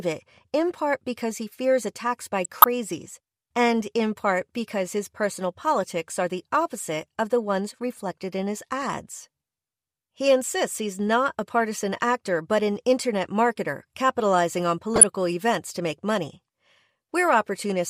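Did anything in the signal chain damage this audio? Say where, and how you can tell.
Yes. DAB burbling from weak reception at the decoder. Burbling hits 2.44–2.64 s after "he fears attacks by", 8.82 s after "ones reflected in his", and 14.96–15.03 s before "events to make money". Residual bit errors corrupt MP2 scale factors. Single sub-bands then jump in level for up to a frame.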